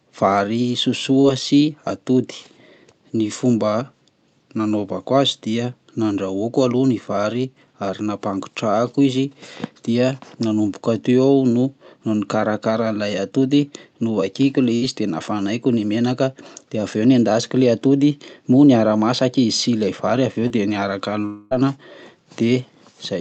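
Speech heard over a packet network, with concealment artefacts at four points. Two are short concealed packet loss, at 1.21 to 1.26 s just before "sy atody" and at 20.48 to 20.52 s. In each, about 20 ms of audio never arrived, and the receiver filled the hole by extending the preceding sound before blending back. The result is a quick smear or wobble rather than an audible gap, which separates it from the longer events. At 14.76 to 14.84 s, right after "novakiko le", a burst of packet loss removes about 60 ms. The concealment holds the last sound as a brief buzz or hiss that sags in level before the audio resumes further on. That held, fading tone is what marks it as a burst instead of a single lost packet. The biggest disruption follows "vary aveo dia niaraka", at 21.26 to 21.53 s. About a quarter of a second is missing, bridged by roughly 250 ms of synthetic continuation that fades but never reaches silence. 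This is a long network dropout, likely a stall in delivery rather than scattered loss. It is told apart from the burst by its length, a stretched, decaying drone lasting several times longer, with a jump forward when the real audio returns.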